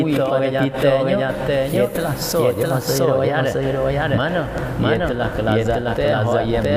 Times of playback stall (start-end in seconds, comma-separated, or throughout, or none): none